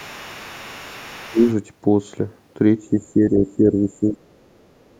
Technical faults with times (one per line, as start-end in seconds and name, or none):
0.00-4.99 DC offset
0.00-1.53 other side's voice leaking through
1.26-1.47 speech suppressed in double talk
2.90-4.47 speech suppressed in double talk
4.85-4.99 other side's voice leaking through